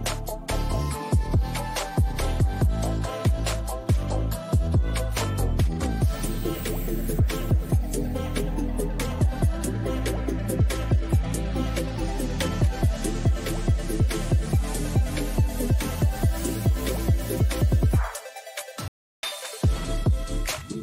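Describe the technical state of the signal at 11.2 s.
No fault is audible at 11.2 s, and the signal is intact at that point.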